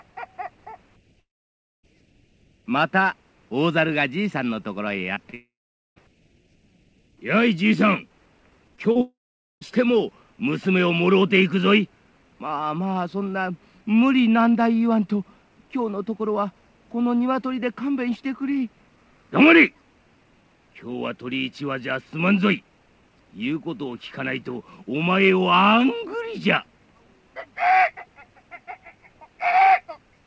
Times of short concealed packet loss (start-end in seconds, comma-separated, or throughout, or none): 5.15-5.34, 8.76-8.97